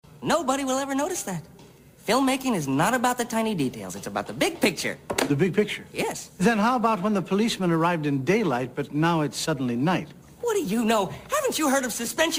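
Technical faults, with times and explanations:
No technical faults can be heard anywhere in the clip. There is nothing here that calls for a time or an explanation.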